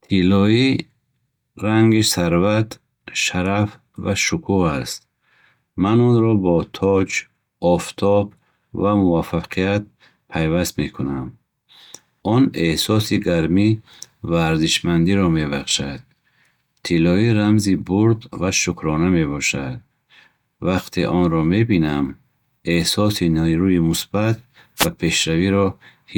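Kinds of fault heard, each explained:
Wireless microphone noise hit: a brief swish of static at about 24.77 to 24.88 s, roughly a tenth of a second, just after "эҳсоси нерӯи мусбат", where the analogue FM radio link fades as reflected signals cancel and the receiver's own hiss rises. Unlike a digital dropout, which leaves a hard gap or a stutter, this fills the moment with broadband noise that swells and recedes rather than cutting to silence.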